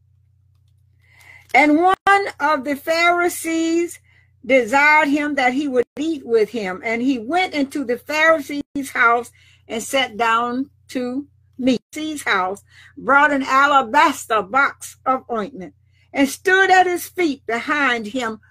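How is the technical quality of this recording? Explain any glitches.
Three brief dropouts interrupt the sound, each a gap at a join of encoded pieces. They fall at 1.94 to 2.07 s (130 ms), 5.83 to 5.97 s (142 ms) and 8.61 to 8.76 s (146 ms). The audio was encoded in separate sections and spliced without trimming. Each section's encoder delay and final-frame padding survive as silence. You hear holes with smeared edges. The sound then resumes where it left off.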